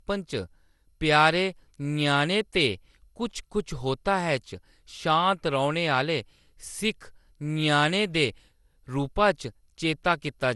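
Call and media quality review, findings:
Generation loss, whole clip. Speech sounds swirly, smeared and hollow, with blurred attacks on consonants. Band empty above about 11.9 kHz. Likely cause: repeated lossy transcoding, roughly seven passes, consistent with an MP2 chain near 96 kbit/s. Each decode and re-encode requantises on a shifted frame grid. Noise and spectral holes build up, so the result is worse than one pass at that bitrate.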